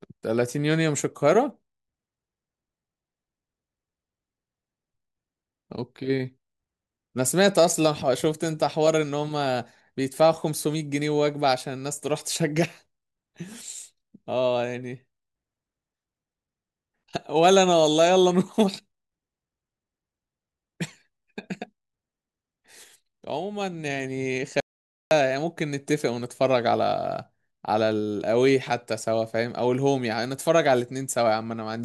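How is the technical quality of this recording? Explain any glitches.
The recording has one clear glitch. An audio dropout to silence runs from 24.60 to 25.11 s. The input was likely lost briefly while recording continued writing silence. The speech stops abruptly into silence with no room tone, and about half a second of speech is missing.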